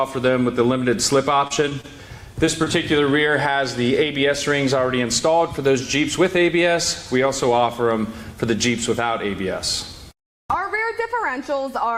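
From 1.47 to 1.86 s, repeated packet loss (robotic sound) chops the audio: four short gaps, the longest 28 ms, are patched by repeating the preceding sound, about a fifth of that stretch. It sounds choppy; the spectrogram shows smeared, repeated columns and abrupt breaks.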